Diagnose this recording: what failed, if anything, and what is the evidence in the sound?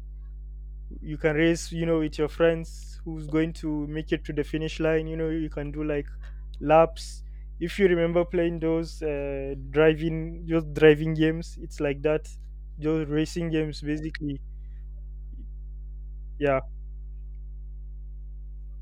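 The analogue wiring is where this went wrong: there's mains hum running under the speech from start to finish, a steady low drone sitting at 50 Hz with a few low harmonics stacked on top. It's loud, something like 15 dB below the speech, so you hear it plainly in every pause. That's a ground loop or a transformer close to the cabling, letting the 50 Hz supply leak into the signal before it ever reached the converter.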